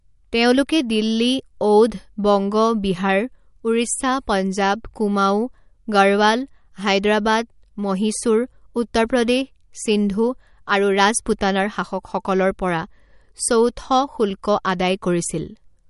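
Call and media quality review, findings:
MP3 compression, throughout the clip. Plainly audible coding damage on the speech: watery, swirly texture, sibilants chirpy and metallic, consonant onsets smeared. Nothing above 11.2 kHz, a hard treble ceiling. Likely cause: a starved MP3 encoder low-passing the top band and zeroing weak frequency lines that flicker between frames, which fits a low bitrate around 48 kbps.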